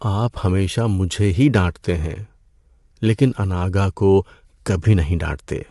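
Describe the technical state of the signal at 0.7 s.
At 0.7 s the speech is rough and grainy, with nothing above 11.6 kHz, likely from low-delay AAC compression, present throughout. Its short frames resolve pitch harmonics poorly, leaving noise between them, which fits a bitrate around 32 kbps. Plain band-limiting would remove the top without this graininess.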